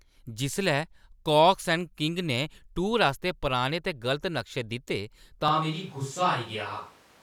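At 5.48 s the speech turns roomy and hollow, with thinner bass, and stays so to the end. The loudness barely changes. Room noise sits roughly 30 dB below the speech. The cause is likely a switch to a distant microphone after the close one dropped out.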